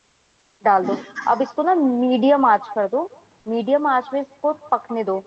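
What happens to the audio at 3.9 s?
At 3.9 s, as throughout, there is echo with no canceller. The far end's loudspeaker feeds its microphone and nothing removes it, so a copy about 23 dB quieter returns roughly 150 ms later. Unlike room reverberation, it is a distinct delayed repeat, not a smooth decay.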